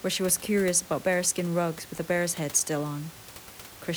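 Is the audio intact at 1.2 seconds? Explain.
Yes, the audio is intact at 1.2 seconds, with only the room noise of the recording space sitting about 19 dB below the speech.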